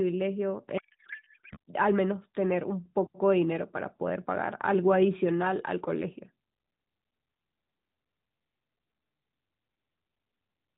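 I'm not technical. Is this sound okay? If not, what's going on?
No. From 0.78 to 1.57 s the speech turns into garbled, warbling noise. This is a codec payload misread: the receiver unpacks the data in the wrong layout.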